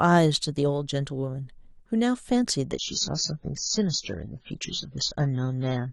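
A speech clip whose quality drops abruptly at 2.72 s and stays degraded to the end, the signature of an adaptive stream at a lower bitrate. The connection slowed, so the player switched to a leaner encode without a gap. Above 7.6 kHz nothing remains, which fits a fall from roughly 96 kbit/s to 16 kbit/s AAC. Unlike packet loss, there is no dropout, only a sudden, sustained loss of quality.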